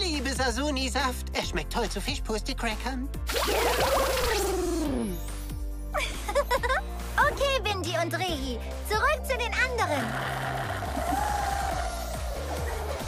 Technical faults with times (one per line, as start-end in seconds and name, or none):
none